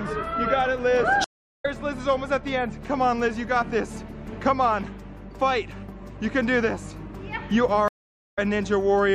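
Two dropouts cut the audio at 1.24–1.66 s and 7.88–8.39 s, with silences of 370 and 450 ms, before it resumes slightly further ahead: a stream reconnect, where the player restarts its decoder mid-stream.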